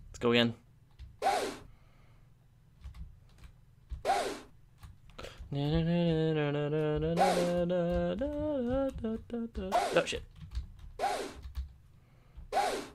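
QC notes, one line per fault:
No audible faults found.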